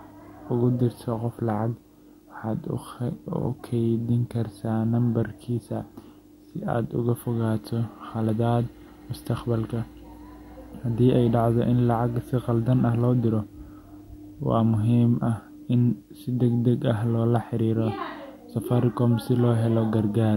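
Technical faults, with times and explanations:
Throughout, video or display buzz: display signals leak into the audio, adding a faint 50 Hz field-rate buzz with hash and a 15.6 kHz line tone.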